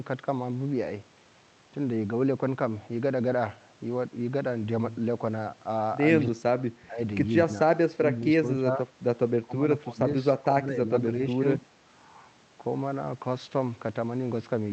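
From 6.29 s, the speech is repeatedly pulled down by roughly 10 to 25 dB. This happens at 6.29–6.43, 6.87–7.0, 7.45–7.67, 7.91–8.86, 9.42–9.65, 9.82–10.06 and 10.43–11.42 s. It is speech suppressed in double talk, likely an echo canceller ducking both sides at once. The waveform shows abrupt notches in the envelope, and the spectrogram shows faded vertical bands.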